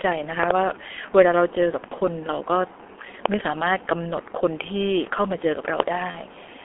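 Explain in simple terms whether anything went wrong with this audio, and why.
Yes, several things went wrong. The whole clip passed through the G.723.1 codec, an old internet-phone format. It keeps only sound between 300 Hz and 3.5 kHz and squeezes the speech hard. So the voice sounds muffled and hoarse, and consonants blur together.

Loud pops jump out above the speech. There are two quick pops from 0.43 to 0.53 s, two more from 3.26 to 3.36 s, and one at 5.80 s. A sudden jolt of electricity, likely from a plug, switch or static, caused these sharp clicks.

There is also VoIP packet loss concealed by the speech codec. One short piece of data, about 30 ms, never arrived, once from 1.88 to 1.95 s and again from 6.11 to 6.17 s. The decoder guessed the missing sound from what came before. So the speech briefly turns into a buzzy tone or noise that fades at those points.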